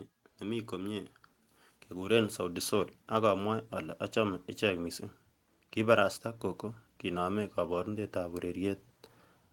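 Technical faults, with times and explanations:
0.41–1.18 s, automatic gain rising: the automatic gain control judged the incoming speech too quiet and turned itself up, lifting the level by about 3 dB over roughly 0.77 s. Because the gain sits ahead of everything captured, the voice and the background noise swell together rather than the voice alone getting louder. On a waveform the envelope widens steadily across that span; on a spectrogram the whole frequency range, noise floor included, brightens uniformly.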